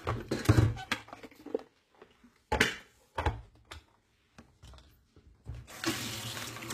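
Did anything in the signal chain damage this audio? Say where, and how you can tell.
Yes, at the codec stage, throughout. The top end sounds bright but synthetic and gritty, with nothing above 14.9 kHz, and the damage is plainly audible. That's likely HE-AAC compression at a low rate, around 20 kbps: spectral band replication copies lower bands upward, so the treble's harmonics don't line up.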